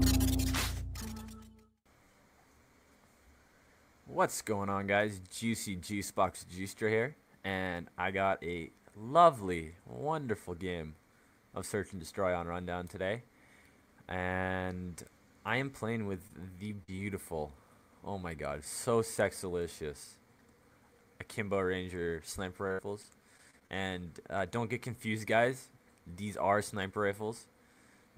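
Short concealed packet loss at 16.27 to 16.31 s: about 20 ms of audio arrived too late, so the receiver extended the preceding sound, leaving a brief smear or wobble. Repeated packet loss (robotic sound) follows from 16.67 to 17.00 s, with gaps up to 44 ms patched about a third of the time, and again from 22.68 to 23.70 s, with gaps up to 66 ms. Each time the sound turns choppy, with pieces missing, as patch follows patch.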